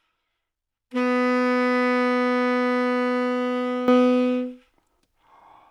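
A recording of sounds carries a sudden gain jump at 3.88 s: from that instant to the end, the whole signal sits about 12 dB louder. This is likely a digital gain setting applied with no ramp, so the level steps between adjacent samples. Unlike a source simply getting louder or an automatic gain control swelling over time, the background noise floor rises by the same amount at the same moment, and the change is instantaneous rather than gradual.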